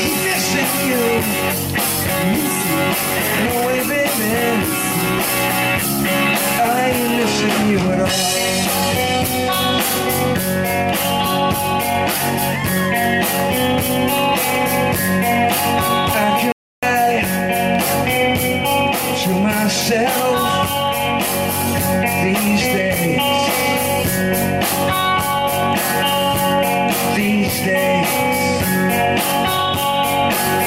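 At 16.52 s the sound cuts out abruptly in mid-flow and the output stays silent for about 0.31 s, resuming at 16.83 s. This is a playback stall: the gap is a dead silence rather than a fade or a glitch. The cause is likely that the player ran short of data or its playback thread was held up, leaving nothing to send to the output until it caught up.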